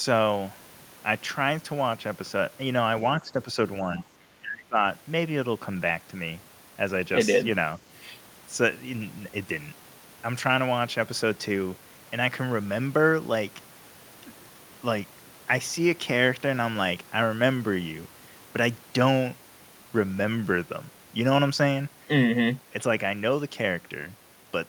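Speech, and from 1.8 to 7.2 s it turns dull and muffled: de-emphasis applied wrongly, a treble cut applied either where there was no boost to undo or twice over, leaving 10 kHz about 11 dB below 1 kHz. Inside that stretch the speech ducks three times, at 3.19 to 3.55 s, 3.83 to 4.07 s and 4.40 to 4.79 s, by roughly 10 dB, closer to 20 dB in the last. That's likely speech suppressed in double talk, with the echo canceller pulling the talker down while the far end spoke.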